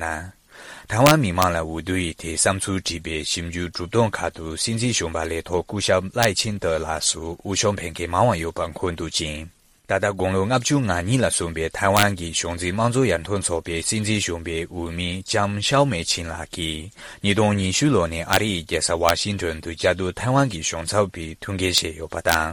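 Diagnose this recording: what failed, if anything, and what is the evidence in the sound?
A gain or mixing stage working in fixed-point integers lacked saturation, so peaks past full scale wrapped to the opposite sign instead of being limited. This integer overflow produces violent cracks, far harsher than clipping, at 1.06–1.44 s, 6.23 s, 11.97–12.03 s, 18.33–18.36 s, 19.09 s, 21.78 s and 22.29–22.34 s. Even overdrives of only about 1 to 3 dB snap each affected peak across the full range.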